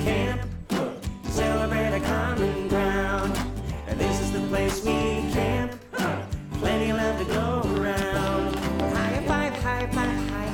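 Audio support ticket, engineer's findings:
Train of clicks, 7.77–10.30 s: about ten regular pops at 3.97 per second, well above the signal. Likely external interference or a failing interface injecting periodic pulses.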